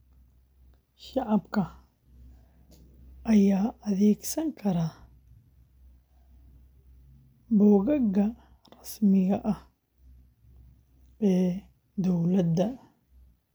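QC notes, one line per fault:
No faults heard.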